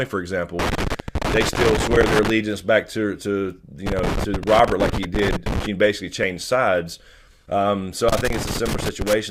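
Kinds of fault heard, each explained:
Loose connector crackle: A worn or dirty contact keeps making and breaking as it shifts, chopping the signal into rough fragments. Three irregular bursts of scratchy crackle sit over the sound, from 0.59 to 2.30 s, 3.86 to 5.66 s, and 8.09 to 9.13 s.
Overlap between stream segments: Two segments claim the same stretch of time, so the player trims audio that was never duplicated. A brief slice goes missing and the waveform jumps. This gives one tiny skip at 6.23 s, which fits a 6-second segment boundary.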